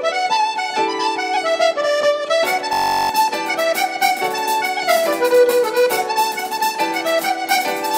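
From 2.73 to 3.09 s the audio falls into a system hang loop. One 21.33 ms slice, which fits a 1024-sample buffer, repeats exactly as the host stalls, giving a steady 46.9 Hz buzz. Unlike a dropout, sound continues, but roughly 0.4 s of material is lost.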